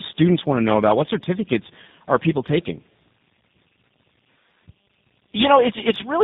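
Tandem speech coding runs through the whole clip: the speech sounds like it passed through three speech coders in a row, likely CVSD, GSM full rate and finally G.729A, each re-coding the last one's damaged output. The result is rough, muffled and warbly, with nothing above 3.8 kHz.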